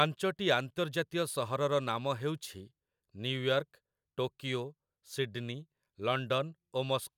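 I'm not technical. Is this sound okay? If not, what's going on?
Yes, this one's fine: nothing in the recording drops out, skips or glitches anywhere, so there's nothing here you need to worry about.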